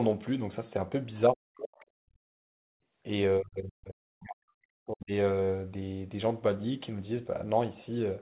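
A speech recording from a call, band-limited to about 4 kHz in a way that fits a narrowband G.711 path, with three kinds of technical fault. The first is speech suppressed in double talk. From 1.3 to 1.81 s the voice sinks sharply, by roughly 40 dB at its deepest, for about half a second. It happens again from 3.39 to 5.12 s, with around 1.5 s of the voice held down in stretches. The likely cause is both sides talking at once. The echo canceller could not tell the near talker from the loudspeaker echo, so it pressed both down. The second fault is the other side's voice leaking through. At 1.80 to 1.85 s a brief scrap of a second voice slips in, very faint, roughly 30 dB below the talker. This is likely far-end audio from the loudspeaker that the canceller failed to remove from the microphone. The brief fragment sits right at the end of the first suppressed stretch. The third fault is background gated by the echo canceller. 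From 2.35 to 2.76 s the room sound drops away, by about 39 dB at its lowest, for around 400 ms. Then it comes back. While the loudspeaker was active, the canceller clamped the microphone hard, and the ambience returned when it released.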